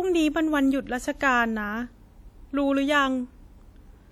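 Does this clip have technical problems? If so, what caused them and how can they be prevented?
Yes. Throughout the speech there is a ringing, washy quality with hiss that swells and fades with the signal, likely from WMA compression. The transform coding spreads quantisation noise over tens of milliseconds around each sound and drops weak components, which fits an early WMA encoder at around 48 kbps. A spectrogram would show smeared, blotchy time-frequency patches and holes between harmonics, though energy still reaches about 20.1 kHz. Encoding at a higher bitrate or with a modern codec would prevent it.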